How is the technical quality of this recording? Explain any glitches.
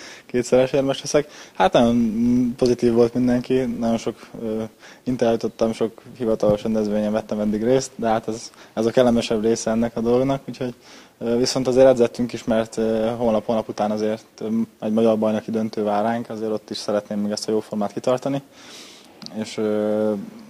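The recording has one technical fault. Filter restarted on every block, 0.0 to 13.87 s: the filter loses its state at each block boundary and starts again from silence, leaving a small transient every time. This produces a 46.9 Hz buzz that follows the sound's level, which fits a 1024-sample block.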